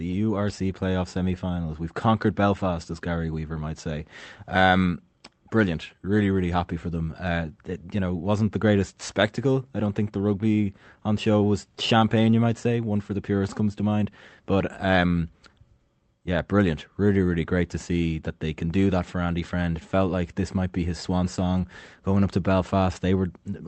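Speech over a WebRTC call path, its top end stopping near 8 kHz as an Opus wideband setting would produce, with no technical faults to report.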